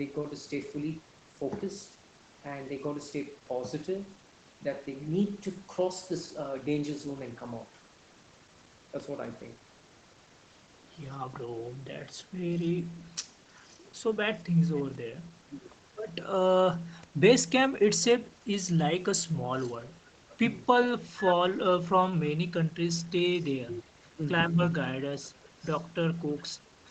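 From 25.19 s to the end of the clip, a faint second copy of the speech trails the original by about 0.41 s, sitting well below the direct voice. This is an echo leak, most likely from the far side playing the call over a loudspeaker, where the echo canceller failed to fully remove what its microphone picked up, so a delayed remnant was sent back into the call.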